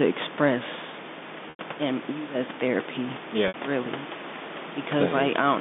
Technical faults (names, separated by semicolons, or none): digital wireless dropout; packet loss with pitch repetition